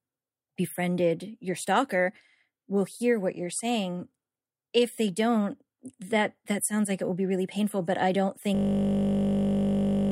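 A system hang loop runs from 8.55 s to the end: a frozen system replays one 20 ms buffer, giving a steady 50 Hz buzz.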